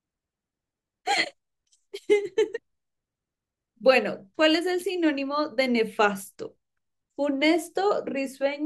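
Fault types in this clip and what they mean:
Listening through the speech here, nothing stood out as a problem.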